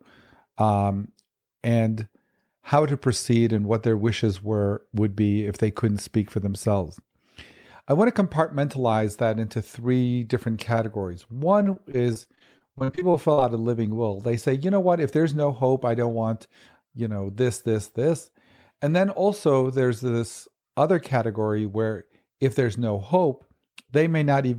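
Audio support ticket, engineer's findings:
Repeated packet loss (robotic sound), 11.63–13.39 s, after "into three different categories", before "a living will they". Choppy speech with pieces missing. Many losses up to 40 ms, each patched by extending the previous sound.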